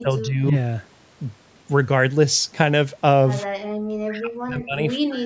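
From 0.01 to 0.54 s, speech suppressed in double talk: the echo canceller likely mistook the talker for loudspeaker echo while the far side was playing, and pulled the voice down by about 10 dB. The same suppression returns from 4.03 to 4.82 s and from 4.98 to 5.25 s, now dipping by about 40 dB. Between these, from 3.49 to 3.75 s, the background is gated by the echo canceller: it clamps the microphone during loudspeaker playback, and the room sound drops by about 32 dB before returning.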